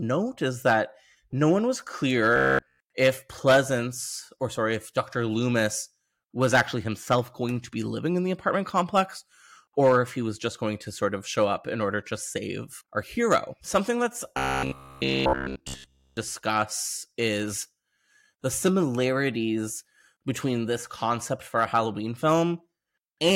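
Speech with robotic sound from repeated short buffers at 2.36–2.80 s, after "that no one was", and 14.37–16.17 s: a rigid 66.8 Hz buzz, likely from a ~15 ms buffer looped throughout.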